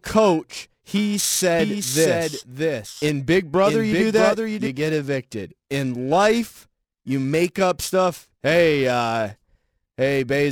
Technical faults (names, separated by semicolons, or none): periodic clock jitter; doubled audio track